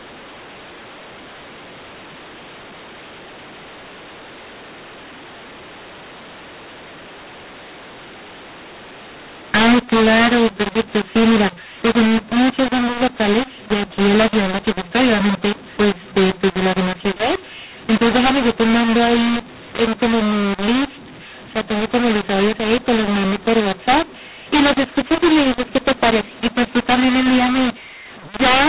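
From start to finish the speech sounds harsh and gritty, levels jumping oddly, and the pauses hiss instead of falling silent. This is a mu-law and A-law mix-up: telephone audio coded as mu-law was decoded as A-law, scrambling sample levels and lifting the quietest ones above silence, all within the 4 kHz telephone band.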